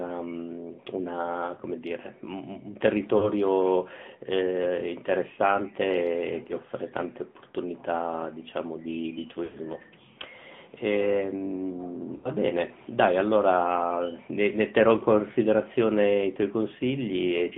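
Throughout, the speech sounds thin and boxed-in, confined to roughly 150 Hz to 3.5 kHz, with a plainly audible buzzy, synthetic edge. This is the AMR narrowband mobile codec, whose sparse pulse-driven vocal-tract model fits a mid-rate mode near 10 kbps.

Lost AMR speech frames cause brief dropouts at 3.18 to 3.30 s, 9.44 to 9.57 s and 12.16 to 12.30 s. Each gap smears into a drawn-out, fading warble before the speech returns slightly rough. These come from about 40 ms, 100 ms and 80 ms of corrupted frames, which the decoder concealed by repeating the last good settings at falling gain.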